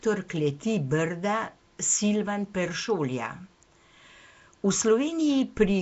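The speech in this clip was likely passed through Nellymoser Asao compression, the old Flash microphone codec, at a low rate consistent with about 32 kbps. Coding fixed blocks with too few bits starves the weaker bands, which get filled with noise instead of signal, so the speech carries a rough, hissy halo and a smeared, underwater quality from start to finish. Nothing remains above 7.7 kHz, dulling the top end throughout.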